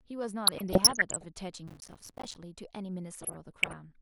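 Throughout, the speech sounds dull and gurgling, likely from MP2 compression at a low rate near 80 kbps. On a spectrogram, the upper bands flicker on and off in blocky strips.

From 0.47 to 1.25 s, DAB burbling appears. Bit errors corrupt sub-band samples and levels, producing short noise blips and level jumps that show as isolated bright band patches, each up to a frame long.

From 1.68 to 2.36 s, processor overload crackle follows. Many buffers of roughly 5 ms miss their deadline and drop to silence, giving gritty tearing. The waveform shows dense, hard-edged gaps.

From 3.21 to 3.80 s, DAB burbling returns, with sub-band blips and jumps and scattered bright patches on the spectrogram.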